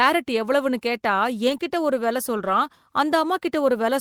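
At 1.49 to 1.55 s there is a lost packet rebuilt from error correction. About 40 ms came from the low-bitrate backup copy carried in the next packets. There is no gap, but the sound turns rough and noisy. Right after, from 1.57 to 1.61 s, short concealed packet loss appears. About 20 ms never arrived, so the decoder stretched the preceding sound and blended back. It comes across as a brief smear. From 2.37 to 2.55 s, error-correction rebuilding returns for about 100 ms, which fits five separate lost packets. The roughness lasts noticeably longer.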